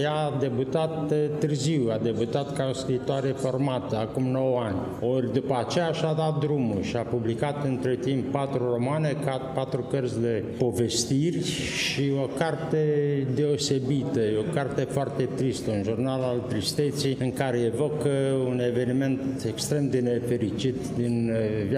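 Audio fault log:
Nothing stood out on listening; no fault was heard anywhere in the clip.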